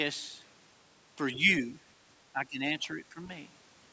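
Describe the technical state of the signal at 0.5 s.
At 0.5 s the speech is intact, with only the normal call microphone processing, whose high-pass filter trims the lowest bass and which carries nothing above 8 kHz.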